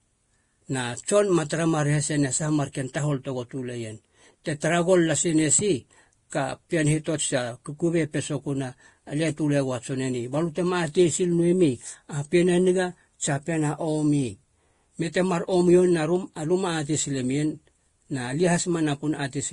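Throughout, the speech likely went through transcoding between lossy codecs, one after another. The result is layered artefacts from both stages, with nothing above 12.1 kHz.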